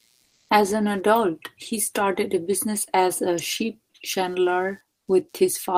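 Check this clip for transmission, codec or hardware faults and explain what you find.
Two faults are present, one hardware and one transmission-related.

Computer activity noise runs throughout: a faint buzz pulsing around 100 times per second, far below the speech. Changing load from the computer's processor, graphics card or mouse disturbs the audio ground. A spectrogram shows evenly spaced vertical ticks or a harmonic comb.

Comfort noise in place of the background appears from 0.25 to 0.49 s, replacing 240 ms. The real background is swapped for steady, featureless hiss whose level shifts by about 6 dB. This is likely Opus discontinuous transmission. The waveform shows a flat, uniform band, and the spectrogram loses its texture.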